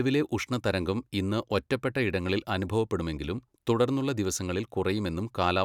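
No technical faults are audible anywhere in the speech recording.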